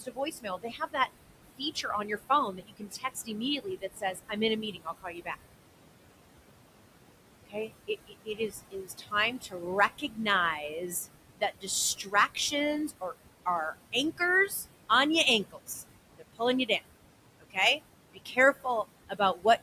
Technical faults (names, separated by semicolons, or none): noise suppressor artifacts; speech cut by the noise suppressor